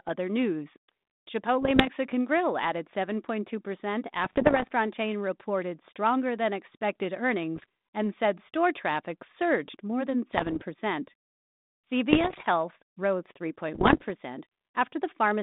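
Speech over a narrowband link whose 150 Hz to 3.7 kHz band fits G.726 ADPCM at around 32 kbit/s, hit by bit errors on the ADPCM link at 1.61–1.90, 4.24–4.72, 7.56–7.66, 10.32–10.64, 12.10–12.46 and 13.74–14.05 s. These come through as pops and rough bursts with brief level jumps, because each flipped bit knocks the decoder's step size and predictor off for a few milliseconds. The last burst is the densest.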